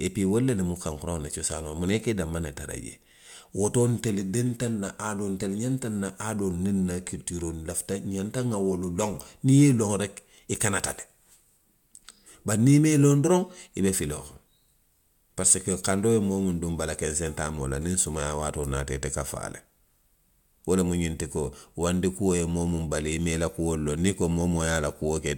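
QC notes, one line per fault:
No technical faults turn up anywhere in this speech recording, and the signal holds steady from its opening moment to its last.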